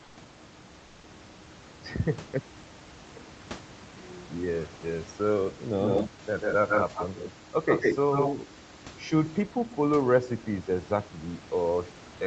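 Speech carried over a call, with two kinds of fault. Discontinuous transmission likely paused the sender from 0.03 to 0.15 s and from 0.85 to 1.03 s, so comfort noise in place of the background fills those gaps with a steady, featureless hiss about 1 to 2 dB quieter. An echo leak from an incomplete echo canceller on a loudspeaker side likely sends the voice back 143 ms late, roughly as loud as the speech, from 5.81 to 6.1 s, 6.41 to 7.33 s and 7.67 to 8.35 s.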